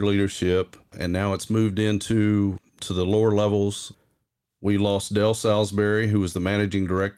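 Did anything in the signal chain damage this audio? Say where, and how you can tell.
No, nothing in the chain seems to have damaged this speech recording, and I can't point to any stage where something went wrong.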